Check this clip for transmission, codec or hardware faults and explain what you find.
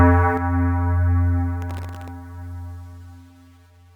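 Two faults are audible: a channel dropout that lasts from early in the clip to the end, and a burst of processor overload crackle partway through.

One channel drops out at 0.37 s and stays gone to the end. The level falls abruptly by about 6 dB and does not recover. The likely cause is one side of a stereo feed being lost, so the mono sum keeps only half of the shared content. Anything present only on that side vanishes, leaving a quieter sound for the rest of the clip.

Processor overload crackle runs from 1.62 s to 2.08 s. The processor falls behind and misses a long run of buffer deadlines, around thirty of them. Each miss is filled with a repeat of old audio. The buffers are very short, well under a millisecond, so these stale fragments with hard edges follow one another rapidly. Together they form a gritty, tearing crackle laid over the sound, which stops once the load clears.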